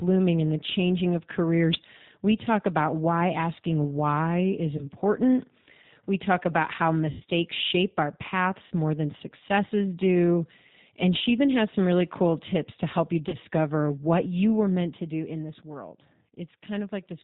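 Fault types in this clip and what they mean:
G.729 codec: the whole clip runs through this 8 kbit/s VoIP codec, which rebuilds speech from a vocal tract filter, a pitch predictor and a few pulses per frame. Nothing above 4 kHz gets through, so the speech sounds narrow, a bit rough and plainly synthetic throughout.
VoIP packet loss concealed by the speech codec: four dropouts where the decoder guessed from its last pitch and filter, fading out into a buzzy tone or coloured noise. They land at 4.77 s, at 7.11 s after "talk about how" (the longest, about 90 ms), at 8.67 s before "more than successes do", and at 13.29 s after "tips to help you".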